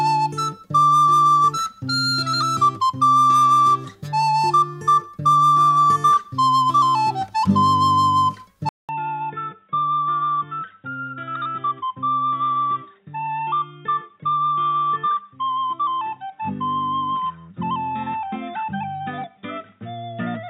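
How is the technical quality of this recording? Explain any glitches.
The recording has one clear glitch that lasts through the second half.

An input switched to a poorer device at 8.69 s, running to the end. The sound likely moved to a different, lower-grade capture path. After a gap of about 0.2 s, the band is cut off above 3.8 kHz, which leaves the audio dull and boxy. It also drops by about 5 dB and picks up a faint new background noise sitting roughly 50 dB under the signal.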